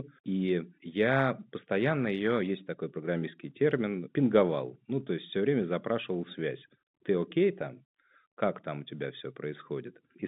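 Nothing stood out on listening to this telephone speech, which comes through G.711 coding with the narrow line band of about 150 Hz to 3.7 kHz that such a call carries.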